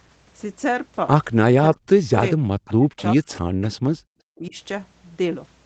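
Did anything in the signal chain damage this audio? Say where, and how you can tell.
Yes, both faults sit in the call processing stage, at the echo canceller. The clearest is speech suppressed in double talk, heard from 1.58 to 2.11 s, 2.31 to 2.5 s, 2.74 to 3.29 s and 3.76 to 4.55 s. The voice sinks by as much as about 40 dB. On a spectrogram the harmonics break into gaps and thinned patches, and the waveform envelope collapses in ragged notches. The likely cause is a canceller that heard both ends at once, could not tell local speech from loudspeaker echo, and ducked everything.

Echo leak shows up as brief, faint repeats of the voice at 2.67 to 2.73 s, 2.97 to 3.03 s, 3.29 to 3.39 s and 3.61 to 3.69 s, each about 20 to 30 dB below the main voice. They trail the original by 396 ms, so on a spectrogram they look like weak copies of earlier harmonic patterns offset by that delay. The likely cause is a far-end loudspeaker whose residual echo slipped past its canceller and was sent back. 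The call codec's band limit at 8 kHz is visible as a clean ceiling throughout.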